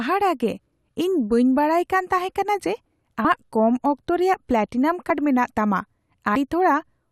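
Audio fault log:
5.10 s and 6.35 s, compressed frames skipped. At each point the speech jumps forward, losing roughly 70 ms of audio. That gap fits about three whole frames, if each frame lasts 26.1 ms. Those frames were either missing from the file or rejected by the decoder as damaged, so they never played. Neighbouring frames overlap, so each join is a short smeared blip rather than a sharp click. Both skips sound alike.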